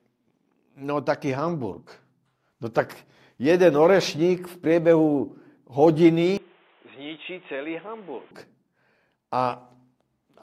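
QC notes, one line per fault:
6.37–8.31 s, input switched to a poorer device: the sound turns abruptly dull and boxy, with nothing above 3.8 kHz, drops by around 10 dB, and carries a new background noise sitting well below the signal, then clears again at 8.31 s. There's no silence at either switch. The likely cause is the input changing to a narrower-band microphone or headset profile. A bandwidth cut or low-pass filter alone wouldn't also shift the level and bring in a different noise floor.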